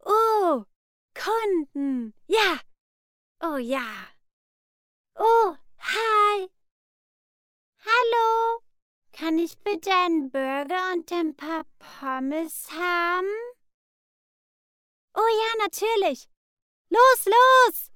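From 3.77 s to 14.75 s the audio is a time-stretched section, slowed to about 0.59 times its pace while pitch holds steady. This likely comes from software lengthening the passage by repeating short fragments, which leaves it dragging until normal pace returns abruptly.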